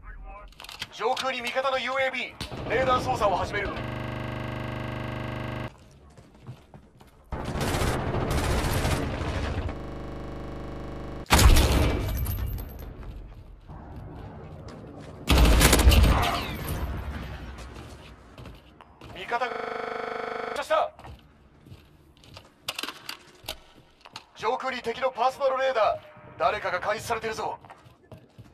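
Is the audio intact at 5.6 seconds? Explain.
No. From 3.84 to 5.68 s a system hang loop occurs: the system froze while the hardware kept replaying one 40 ms buffer, producing a rattling 25 Hz buzz and losing about two seconds of audio.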